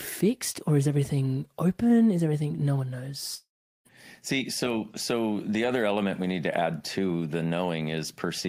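Right after "everything no one", at about 3.35 s, the last sound smears into a fading buzz, then roughly 0.39 s of near silence until 3.87 s, and about half a second of speech never returns. That's likely a long network dropout.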